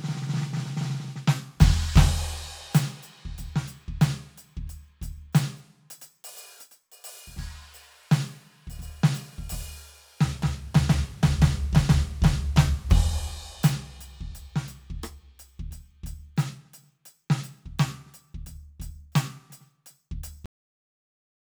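At 20.46 s the music hits a cut-off end: the final buffers never played, so sound stops mid-note into digital silence, a flat waveform and a blank spectrogram.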